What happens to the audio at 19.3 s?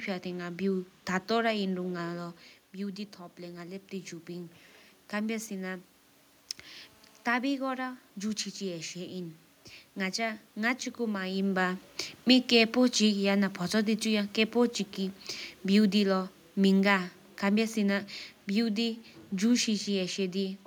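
The speech and its room background are sinking together, about 6 dB quieter, as the automatic gain falling from 11.46 s to 19.69 s steadily lowers the level.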